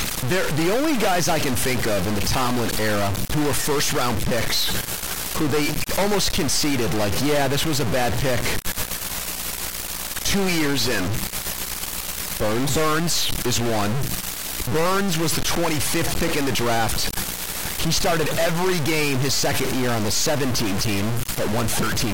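From the first second to the end, the speech carries a harsh, buzzy distortion, and the pauses never go quiet; they fill with a gritty noise floor instead. That points to a stuck bit, likely a converter or data line holding one bit fixed. Roughly half the samples jump by that bit's weight, around -20 dBFS, so loud passages buzz and the quiet gaps hiss as small values cross zero.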